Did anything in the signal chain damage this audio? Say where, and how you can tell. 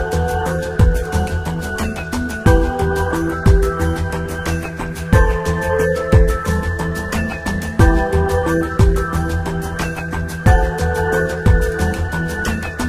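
No, nothing in the signal chain has left an audible mark on this audio, and every stage from capture to playback seems to have passed the signal on intact.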